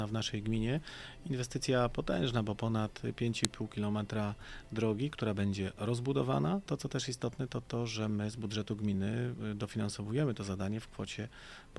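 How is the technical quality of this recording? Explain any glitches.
One glitch stands out: a sharp, loud click at 3.45 s. It is a file header played as audio. Where two pieces of the recording were joined or streamed together, the leading header bytes of the second piece were left in place and decoded as if they were sound, producing a brief snap lasting about a millisecond. Unlike a dropout or clipping click, it has nothing to do with the level or content of the surrounding audio. It is a single spike that marks the seam between pieces.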